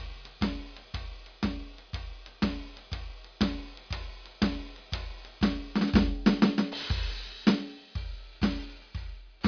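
Throughout the music, aliasing: content above about 5.5 kHz folds back as gritty, metallic tones, consistent with unfiltered downsampling to roughly 11 kHz, unlike plain low-pass dulling.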